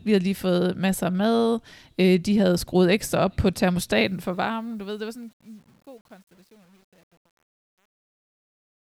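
Truncation distortion on a fade runs from 3.95 s, just after "skruet ekstra op på", to the end at 8.96 s. The speech fades out from around 4 s, and the gain stage drops low-order bits without dither, which fits roughly a 9-bit word length. As the level sinks toward the smallest step, the waveform collapses into coarse square steps. From 4.75 s onward the tail turns gritty.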